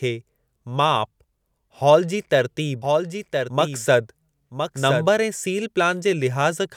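A doubled audio track runs from 2.82 s to 5.06 s in this speech clip, ending just before "ऐं सील". A second full-band copy of the speech trails the original by about one second, a few dB quieter, with no decay or room colour, and it cuts in and out abruptly at those times. This is likely a second capture through a slower path, or an edit holding two copies out of step.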